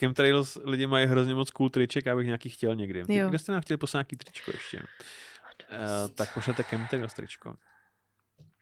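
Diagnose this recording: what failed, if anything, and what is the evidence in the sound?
Nothing here points to a failure at any stage; the speech simply rides on Opus voice compression in its hybrid, fullband mode at 24 kbps, which leaves only a light coding texture of its own.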